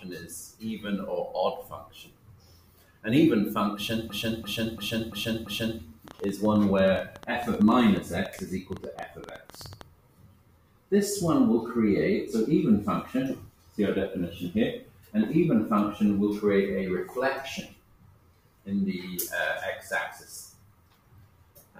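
From 4.10 to 5.80 s a system hang loop takes over. The same 341 ms slice of sound plays five times, exactly alike, repeating at 2.93 per second. This is what happens when the driver or computer freezes while the audio hardware keeps cycling one ring buffer, here one that fits a 16384-sample buffer. Each repeat is a perfect copy, so it is a rhythmic, machine-gun stutter, with essentially nothing lost once playback moves on.

From 6.08 to 9.82 s comes a train of clicks. Around forty short pulses of much the same shape land on the sound at about 9.6 per second, spaced unevenly and peaking roughly 5 dB above the signal. They are likely interference from nearby equipment or a faulty connection. Unlike the loop, no sound is repeated: these are separate ticks and pops laid over the audio, and their spacing drifts rather than locking to a steady rate.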